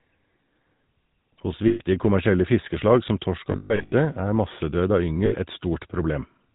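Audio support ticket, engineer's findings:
GSM full-rate codec, whole clip: buzzy, gravelly speech, nothing above 4 kHz. Regular-pulse excitation through a vocal-tract filter, with two of every three excitation samples discarded. Damage plainly audible; fits a 13 kbps full-rate stream. Probable component: GSM voice leg.

Lost GSM frames, 1.68–1.81 s, just before "kommersielle fiskeslag som torsk": about 120 ms of metallic ringing. Decoder repeating last good frame's parameters.

Lost GSM frames, 3.52–3.93 s, after "kommersielle fiskeslag som torsk": scattered dropouts, about 300 ms lost across 0.4 s, longest run around 150 ms. Repeated rough ringing, same concealment.

Lost GSM frames, 5.26–5.46 s, after "massedød av": brief metallic hold, about 60 ms lost.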